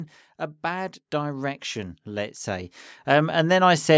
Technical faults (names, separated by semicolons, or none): automatic gain rising